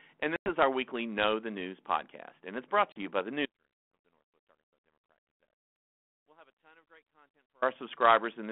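Packet loss on an ADPCM call hits twice. At 0.36 s a 100 ms hole opens just before "our weekly", which fits about five 20 ms packets. At 2.92 s a 40 ms hole falls between "podcast and it's brought" and "you by the". Each gap is filled with hard-edged silence. Because the ADPCM decoder's adaptive predictor and step size have drifted from the sender's, the speech comes back with a brief distortion wobble before the decoder re-tracks.

An audio dropout to a faint residue runs from 3.46 s to 7.62 s, right after "you by the", and lasts about 4.2 s. The speech cuts out abruptly rather than fading. Only a faint sound remains, roughly 35 dB below the normal level, which points to the signal likely being lost upstream while the path after the break stayed live. The residue keeps the narrow 200 to 3400 Hz band of the 32 kbit/s G.726 link.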